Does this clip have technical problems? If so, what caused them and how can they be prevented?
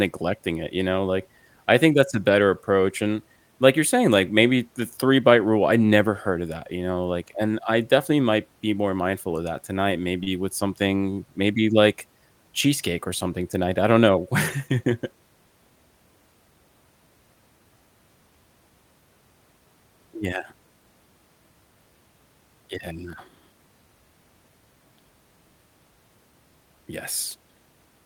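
Yes. A short stall from a late packet occurs at 10.23–10.29 s. With the jitter buffer empty, the receiver stretched the last sound by 31 ms and lost nothing. A spectrogram shows a smeared, flattened stretch and the waveform a run of repeated cycles. An adaptive jitter buffer with more headroom, plus prioritised network traffic, would prevent it.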